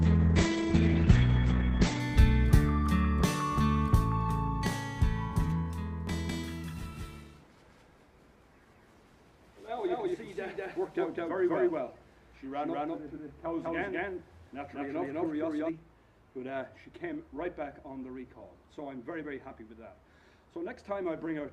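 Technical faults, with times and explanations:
0.00 to 2.00 s, adaptive stream starting at a low bitrate: the opening has nothing above 8.6 kHz and stronger codec artefacts, which fits a very low Opus rate. Once the connection is measured, the player switches to a far better version, and the sound opens up abruptly with no gap.
6.07 to 15.69 s, doubled audio track: a second full-band copy runs about a fifth of a second behind, at roughly the same level. It has no decay or room colour and starts and stops abruptly, likely from a slower duplicate capture path or an edit left holding two offset copies.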